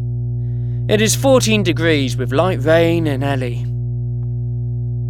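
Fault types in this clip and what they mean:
Mains hum: a steady low tone at 60 Hz runs under the speech for the whole clip, the mark of power-line current leaking into the signal path, likely through a ground loop or a transformer sitting close to the cabling. It is strong here, only a little quieter than the speech itself, so the drone stays plainly audible through every pause and thickens the low end beneath the voice, with some low harmonics stacked above the fundamental.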